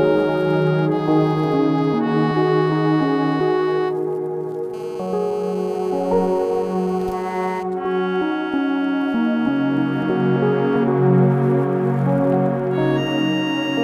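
From 4.74 s to 7.63 s a GSM phone buzz sits under the sound: a nearby 2G phone on a call pulses its transmitter 217 times a second, and the audio circuit rectifies those bursts. It gives a hard, raspy, steady buzz about 21 dB below the signal, harsher and higher than smooth 50 or 60 Hz mains hum.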